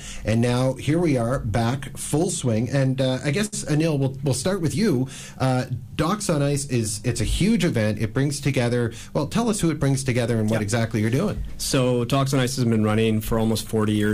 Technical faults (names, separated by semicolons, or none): short stall from a late packet